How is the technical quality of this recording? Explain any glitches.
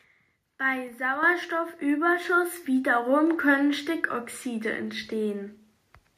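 The level jumps twice, at 1.23 s and again at 2.25 s. Both are microphone volume steps: the call software decided the mic was too quiet and bumped the input gain, by about 6 dB and then about 4 dB. The speech and the background jump up together.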